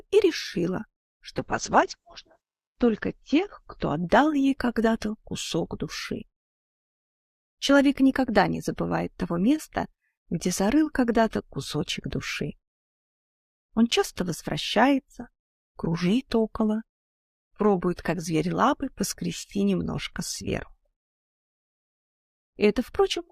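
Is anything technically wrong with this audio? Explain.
Yes. A call bitrate drop runs from 1.36 to 5.51 s. The encoder was starved of bits, which fits a fall from 64 kbps to 8 kbps. Coding turns coarse and rough. The top end narrows from 20 kHz to 8 kHz, so the sound goes muffled, worst for about 1.08 s.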